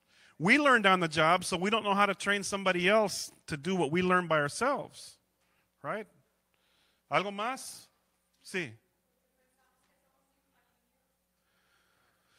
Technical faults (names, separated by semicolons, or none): none